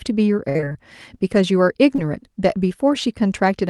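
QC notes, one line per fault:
0.49–0.77 s, repeated packet loss (robotic sound): six separate dropouts hit this quarter-second stretch, the longest 53 ms and about 160 ms missing in total. The receiver concealed each hole by extending the preceding sound, so more than half of the span is synthesised rather than received. Because the gaps follow one another so closely, the patched segments join into a choppy, robotic texture with fragments of the signal absent.
1.96–2.00 s, short concealed packet loss: roughly 20 ms of audio failed to arrive in time, and the decoder bridged it with about 22 ms of synthesised continuation before crossfading back into the real signal. The Opus path filled the hole from the last sound's pitch or as shaped noise. The result is a single brief smear or wobble.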